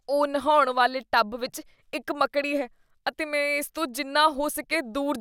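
No technical faults are audible.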